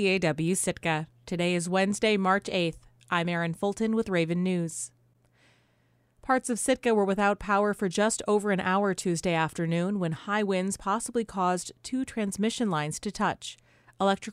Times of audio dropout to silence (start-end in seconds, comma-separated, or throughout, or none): none